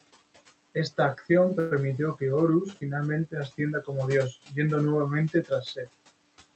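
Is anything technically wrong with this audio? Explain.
Yes, there are three kinds of fault in this speech.

Noise suppressor artifacts run through the whole clip. The suppressor pulls down bands it judges to be steady noise, by about 18 dB here. The room noise sinks in pauses and returns under the talking.

A call audio freeze sits at 1.59 to 1.73 s. The sound stalls and is stretched into a brief fading buzz or hiss for about 116 ms. The likely cause is delayed packets draining the jitter buffer. Speech then resumes where it stopped, with nothing lost.

Speech cut by the noise suppressor occurs at 4.32 to 4.58 s and again at 5.30 to 5.89 s. Parts of the speech were mistaken for noise and turned down, by up to about 21 dB and about 15 dB. The affected sounds come across swallowed and faint.

The room noise sits about 17 dB below the speech. The Opus call path limits the top end to 8 kHz.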